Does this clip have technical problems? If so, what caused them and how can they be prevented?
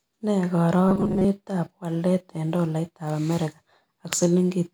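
Yes. From 0.88 to 1.25 s, just before "walet eng'", robotic sound from repeated short buffers imposes a rigid 188 Hz metallic buzz, likely from late audio being replaced by repeated fragments of about 5 ms. Unlike a dropout or stutter, this produces no gap or audible loop, only a fixed-rate buzz. Larger buffers and prompt audio delivery would prevent it.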